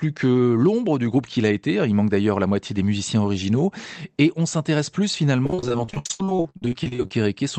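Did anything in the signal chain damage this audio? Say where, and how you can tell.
Yes. The damage is in the network stage, as repeated packet loss (robotic sound) from 5.44 s to 7.11 s. Across that span the speech turns choppy, with around thirty short holes; the longest is about 79 ms. Roughly half of the stretch is patched sound, not real signal. Packets kept arriving late or not at all. The receiver filled each hole by extending the last sound, which produces the robotic texture. The call codec's 8 kHz bandwidth limit applies throughout.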